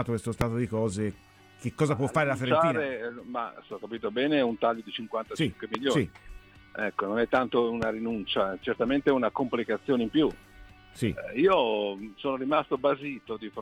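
Three loud pops break through here: at 0.41 to 0.43 s, 5.75 to 5.77 s and 7.82 to 7.85 s. Each is a single sharp crack, about 15 dB above the surrounding level and over in roughly 20 ms, with the sound carrying on underneath. That points to a sudden voltage jump getting into the chain, likely from a plug, switch, static discharge or a driver hiccup, which the downstream circuitry then rounds into a short pulse.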